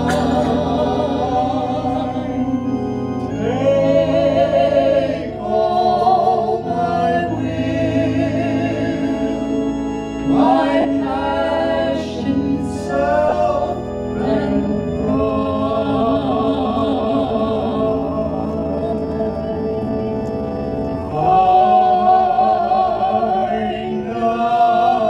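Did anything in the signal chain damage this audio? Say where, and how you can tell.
Yes. At 10.81 to 10.85 s and again at 13.29 to 13.32 s the sound briefly turns into a noisy smear. These are lost LE Audio frames on the Bluetooth codec link. Gaps of 40 ms and 30 ms fit four and three 10 ms frames, which the LC3 decoder filled with the previous spectrum under randomised signs.

From 14.41 s to the end, the pace abruptly drops to about 0.66 times speed while the pitch stays put. This is a time-stretched section, likely from software repeating short pieces to lengthen the audio without shifting its pitch.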